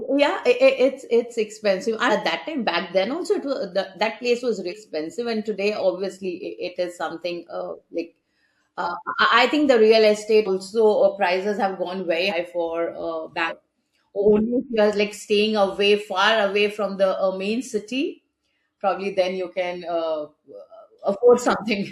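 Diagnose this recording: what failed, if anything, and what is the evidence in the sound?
Compressed frames skipped at 2.09–2.11 s, 4.69–4.73 s, 8.83–8.85 s, 10.45–10.49 s, 12.29–12.33 s and 13.48–13.52 s, a codec or storage fault. At each point the speech lurches forward, losing roughly 150 to 300 ms. The jump sizes point to several 42.7 ms frames going missing each time, either absent from the file or rejected by the decoder.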